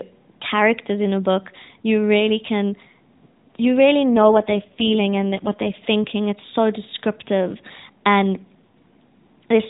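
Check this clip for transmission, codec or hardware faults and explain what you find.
One fault stands out, heard over speech carried on an AMR narrowband mobile codec that keeps everything below 4 kHz and is lightly coloured throughout.

AMR rate drop, from 4.16 to 5.77 s. When the radio link weakens, the network orders the encoder down to a lower mode and spends the freed bits on error protection. The band stays the same and nothing drops out, but the voice turns buzzier and more synthetic for that stretch, which fits a step from 12.2 to 5.9 kbps, then clears as the rate recovers.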